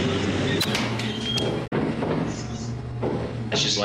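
A short stretch of damaged data in the compressed stream hits this audio between 1.63 and 1.73 s, so roughly 0.1 s of the signal is replaced by a brief garbled blip. That region of the encoded file or stream was corrupted. The decoder either misinterpreted those frames or discarded them, lost frame sync, and had to scan forward for the next valid frame header before normal decoding resumed.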